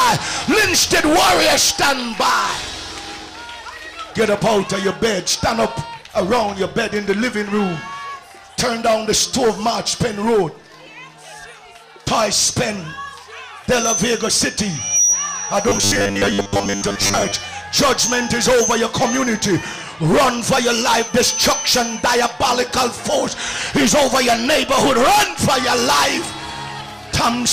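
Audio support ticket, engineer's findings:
Robotic sound from repeated short buffers, 15.69 to 17.33 s. Sound collapses into a rigid metallic buzz near 100 Hz. Likely audio arriving too seldom, so playback loops roughly 10 ms chunks over most of this span, skipping real audio.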